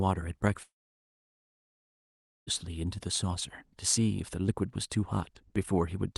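A long network dropout runs from 0.63 to 2.49 s in this speech clip. The sound stops arriving, the last fragment smears into a brief fading buzz, then near-silence holds for about 1.8 s before speech resumes with that stretch missing, likely from lost call packets. Around it, the audio carries the band-limited, lightly coded character of a call codec, topping out near 12 kHz.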